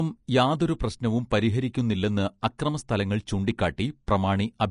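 From start to end, the speech carries plainly audible Vorbis compression artefacts, likely from encoding at a low bitrate, and the damage fits something near 38 kbps. Nothing is present above 10.5 kHz, so the top octave is missing. Below that cut-off the treble was quantised too coarsely to keep its fine structure, so it comes through as hiss and grain of similar energy. Tones sound roughened and consonant attacks are smeared.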